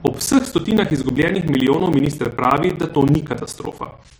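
From 0.07 s to 4.11 s, the speech is broken by periodic USB or driver dropouts. Every 64 ms, about fifteen times a second, a brief gap opens. Each gap lasts around 10 ms and is filled with silence. Around seventy of them fall across this span. Something is stalling the USB bus or the audio driver on a fixed cycle, so audio is lost each time. The result is a steady ticking that rides on the speech.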